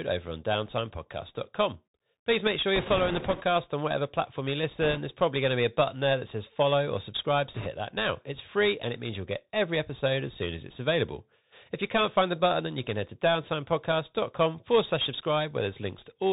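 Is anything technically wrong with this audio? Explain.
Yes. The speech has been through a Bluetooth CVSD headset codec and has three bursts of bit errors on the Bluetooth voice link.

The Bluetooth CVSD headset codec affects the whole clip, and the damage is plainly audible. CVSD sends one bit per sample, each bit saying only whether the waveform steps up or down, while the step size adapts to the signal. The sound points to a 64 kbit/s stream. Everything above 4 kHz is missing, so the speech sounds narrow and telephone-like. A granular hiss sits under it, s sounds come out scratchy, and loud high-frequency parts distort where the step size cannot keep up with the waveform.

Bit errors on the Bluetooth voice link occur from 2.76 to 3.42 s, from 4.81 to 4.99 s, and from 7.54 to 7.67 s. The error rate is a few percent, heavier in the first and third bursts than in the second. In CVSD every bit carries the same small weight, and the adaptive step lets an error fade out quickly. 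The flipped bits therefore produce a rushing, crackly noise laid over the speech in those stretches rather than sharp clicks or dropouts.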